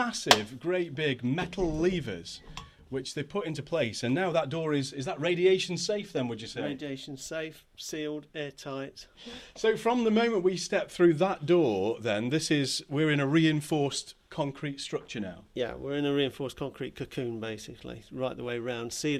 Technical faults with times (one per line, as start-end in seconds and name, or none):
none